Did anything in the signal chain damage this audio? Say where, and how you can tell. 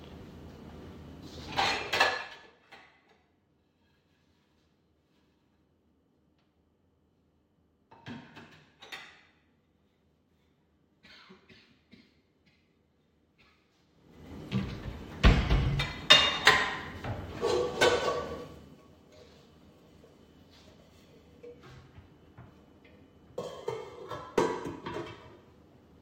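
No damage anywhere in the chain.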